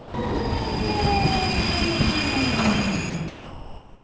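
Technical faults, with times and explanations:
0.00–0.14 s, 3.10–3.14 s and 3.28 s to the end: sound dropped by the voice detector. Each time the sound gives way to steady noise or near silence. About 130 ms is lost at the start, 40 ms in the short gap, and 540 ms at the end. The likely cause is a sender-side detector judging the sound to be background and pausing transmission, with the receiver filling the gap with generated comfort noise. That fill stays band-limited below 8 kHz, like the rest of the G.722 call audio.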